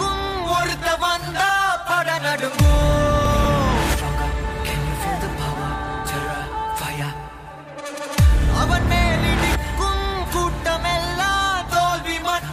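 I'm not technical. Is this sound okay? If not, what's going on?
No. There are two lost LE Audio frames, at 3.44 s and 6.06 s. Each time, about 10 ms of the wireless signal went missing. The player filled the gap with a scrambled copy of the previous moment, so you hear a tiny noisy blip.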